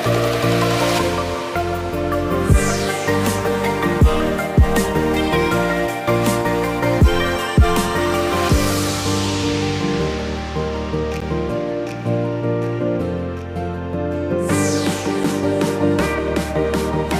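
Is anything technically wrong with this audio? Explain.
Yes. There are two blocks of digital silence, at 11.20 s (about 11.6 ms) and 15.24 s (about 6.9 ms). Output samples went to zero with no fade, and the blocks sound like ticks. The first length fits a 512-sample buffer. Hard edges and an abrupt gap distinguish this from a fade-out dropout.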